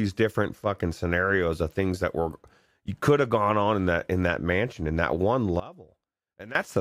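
At 5.60 s the speech and its background noise drop together by about 19 dB, then snap back at 6.55 s. This sudden gain jump likely comes from a digital gain change applied between adjacent samples with no ramp to smooth the transition.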